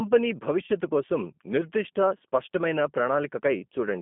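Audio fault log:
throughout: G.729 codec. The speech has been squeezed through a low-rate model of the voice: a vocal tract filter, a pitch predictor and a few pulses per frame, consistent with 8 kbit/s G.729A. Only the content between about 200 Hz and 3.4 kHz survives, so it sounds narrow and telephone-like. The damage is plainly audible: voiced sounds come out slightly rough and synthetic, because the excitation is rebuilt from sparse pulses rather than the real signal.
0.66 to 0.70 s and 2.18 to 2.21 s: VoIP packet loss concealed by the speech codec. At each point about 20 ms of audio never arrived, which fits a single lost packet. The decoder filled the gap by extending its last pitch and filter settings at falling gain. The result is a short, fading stretch of extrapolated sound in place of the missing speech. Because every frame builds on the one before, the voice stays weak or distorted briefly after each gap.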